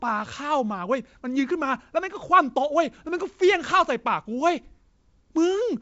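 No technical faults are audible anywhere in this speech.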